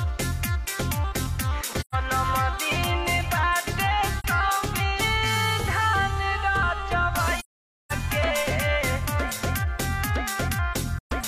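Four soft-edged dropouts from AAC frame loss with muting: 1.80 s (128 ms), 4.19 s (43 ms), 7.39 to 7.92 s (512 ms), and 10.98 s (128 ms). The decoder zeroed the missing frames, so the overlapping windows fade each gap out and back in.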